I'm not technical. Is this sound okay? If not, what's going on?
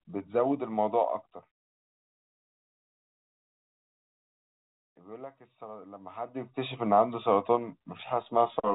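Yes, this sound is okay; nothing is going wrong in it.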